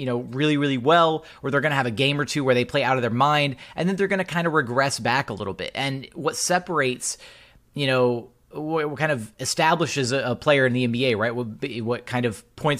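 No dropouts, clicks, distortion or other technical faults are audible anywhere in the recording.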